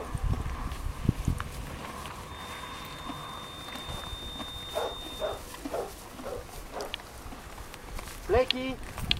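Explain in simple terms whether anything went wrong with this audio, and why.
A thin, steady whistle at about 3.6 kHz sits quietly behind the sound from 2.23 to 5.45 seconds, swelling and fading slowly in level. This feedback whistle is likely caused by a loudspeaker feeding back into the microphone, hovering just short of a runaway howl.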